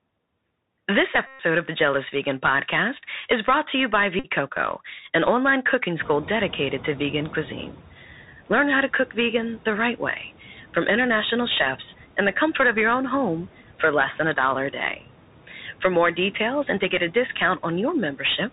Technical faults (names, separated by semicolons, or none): Bluetooth CVSD headset codec; Bluetooth headset packet repeated; noise suppressor catching up